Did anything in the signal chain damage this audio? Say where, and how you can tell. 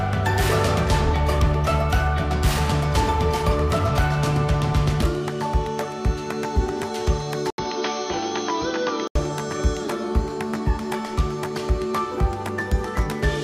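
Yes. Driver stage: from 7.50 to 9.15 s, after an 80 ms gap, the sound dulls, drops slightly and stops at 6.4 kHz, likely from an input switched to a poorer device.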